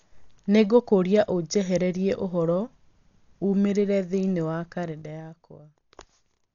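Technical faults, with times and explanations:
Throughout: Dolby Digital compression. Speech sounds dull, with nothing above 6.9 kHz and rough, fluttering noise, likely from heavy coding near 48 kbps.
4.83–5.67 s: zipper noise. After "ũmĩrĩire thĩinĩ wa", level drops about 15 dB in 2 dB steps, ten per second, each step clicking audibly.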